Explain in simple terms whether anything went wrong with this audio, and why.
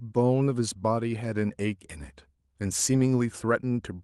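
Nothing went wrong with this speech recording. It sounds like it passed through an ordinary internet call connection, which keeps sound up to about 12 kHz and gives it the slightly softened top end that calls usually have.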